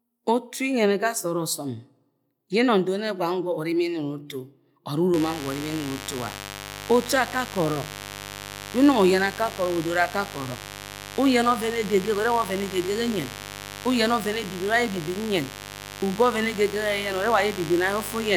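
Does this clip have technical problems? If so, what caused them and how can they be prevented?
Yes. A mains buzz enters at 5.14 s and runs to the end at 18.37 s. It is a steady, raspy 50 Hz buzz, about 15 dB below the speech. Sharp switching spikes, twice per mains cycle, spread harmonics up into the kilohertz range. Shielded cables, proper grounding and keeping away from dimmers prevent it.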